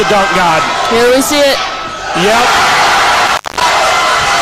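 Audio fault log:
3.26–3.68 s, intermittent contact: the signal drops out for roughly 206 ms within this span, bracketed by short crackles as the connection breaks and then remakes. A loose plug or cable conductor briefly loses contact, so the program material stops reaching the input while the line floats open. Faint hiss remains during the gap. The crackle comes from the contact surfaces scraping at the moments of separation and reconnection.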